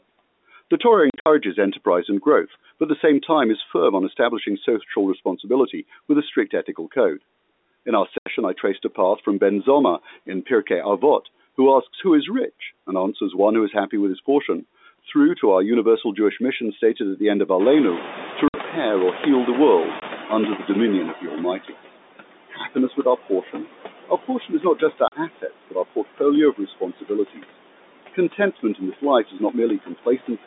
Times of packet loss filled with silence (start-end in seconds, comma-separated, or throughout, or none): 1.10-1.26, 8.18-8.26, 18.48-18.54, 20.00, 25.08-25.12